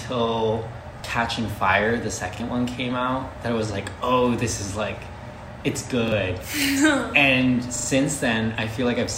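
Repeated buffer at 1.00–1.04 s, 2.36–2.40 s and 6.08–6.12 s, then 7.76–7.88 s: new audio arrived late, so the same block, consistent with a 40 ms buffer, played again. Each is a brief, hard-joined stutter. The last block repeats three extra times, losing around 100 ms.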